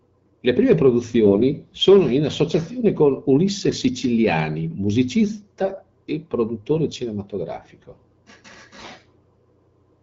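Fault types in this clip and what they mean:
AMR bit errors: flipped bits in the weakly protected parts of AMR-WB frames slip past the checksum, so the decoder builds sound from misplaced excitation pulses and slightly wrong pitch, gain and spectral values. The speech keeps roughly its pitch and loudness but turns hoarse and gargly, briefly after "sono in associazione con" at 3.68 s, worst from 5.64 to 5.81 s before "e produttore", and again at 8.77–8.90 s. Unlike frame loss, nothing drops out or goes muffled.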